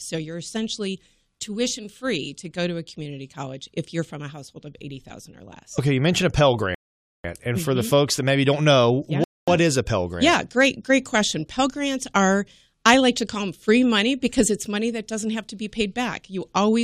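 At 6.75 s and again at 9.24 s the speech halts in a rebuffering stall, silent for about 0.5 s and 0.24 s, as playback waits for data, then resumes exactly where it stopped. Waveform and spectrogram show clean, empty gaps with no missing speech.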